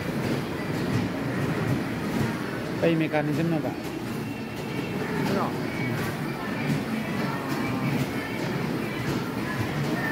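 No technical faults can be heard anywhere in this recording.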